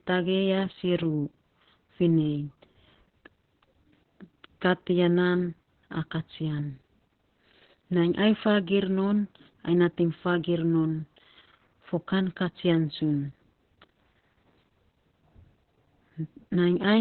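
Opus voice compression runs through the whole clip. Nothing reaches above 4.2 kHz, so the speech sounds narrowband and muffled. The coarse, hoarse, slightly robotic texture points to SILK linear-prediction coding at a very low bitrate, around 8 kbps.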